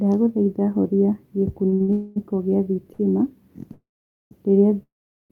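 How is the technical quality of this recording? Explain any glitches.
Playback is repeatedly interrupted by network timing problems. The speech is all there, but several stretches are held, stalled or padded with silence.

Short stalls from a late packet occur at 1.69 to 1.74 s, 1.74 to 1.82 s, 1.82 to 1.90 s, and 2.94 to 3.01 s. Each time a packet arrives late, the receiver holds the last sound for 26 to 63 ms, which is heard as a brief drawn-out buzz. Speech then resumes from the same point.

Call audio freezes follow at 1.92 to 2.18 s, 3.73 to 4.33 s, and 4.83 s to the end. The likely cause is packets held up in transit, which empties the jitter buffer. The first freeze is a fading buzz lasting about 240 ms. The second and third fade into silence of roughly 480 ms and 410 ms. Each one inserts a gap of up to 580 ms without dropping any speech.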